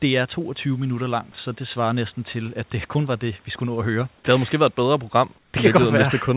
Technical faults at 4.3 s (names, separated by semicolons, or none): none